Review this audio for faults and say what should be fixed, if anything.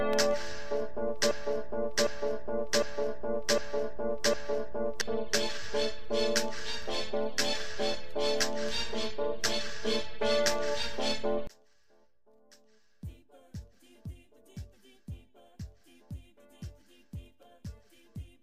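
From 1.31 to 5.01 s there is a broken-record loop. The same 0.76 s fragment plays five times back to back, and whatever should have been heard in that stretch is missing. The likely cause is a player, encoder or stream stalling and resending the last fragment it held. On a spectrogram this looks like identical blocks tiling at 0.76 s intervals, and the waveform repeats its shape exactly. To prevent it, make the decoder conceal gaps or output silence instead of replaying a stale buffer.

From 11.47 s to the end, one channel is inverted. When the two channels are summed to mono, the level falls by about 31 dB, leaving only a faint residue of what differs between them. This likely comes from a polarity flip in one channel's wiring or processing. A spectrogram of this section is nearly empty. A phase-correlation or mono-sum check before delivery would catch it.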